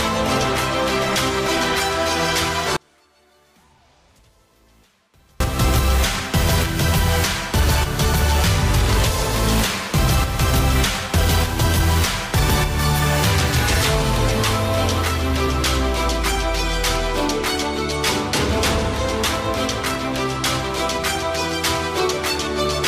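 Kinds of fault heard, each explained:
Audio dropout to a faint residue: from 2.77 to 5.40 s the sound abruptly vanishes for about 2.6 s, leaving only a faint leak far below normal level, likely from a brief loss of the signal path while it stayed live; the waveform collapses to a thin sliver and the spectrogram shows a near-empty band with sharp edges.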